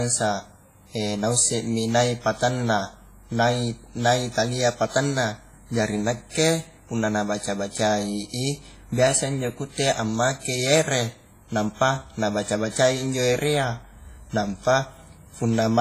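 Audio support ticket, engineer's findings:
Speech, whole clip: heavy WMA compression artefacts, ringing, washy smear, hiss pumping with the signal, nothing above about 15.4 kHz. Likely a low-bitrate WMA encode, around 24 kbps, long transform blocks spreading quantisation noise over tens of milliseconds, weak components zeroed out.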